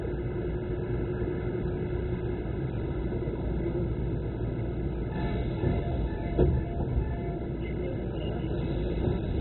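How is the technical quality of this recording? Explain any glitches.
Quality is poor throughout. The sound is dull and gurgling, with nothing above 4 kHz. This is likely MP2 compression at a very low rate, around 16 kbps. Upper sub-bands are switched off, and the rest are coarsely quantised, giving heavy granular distortion.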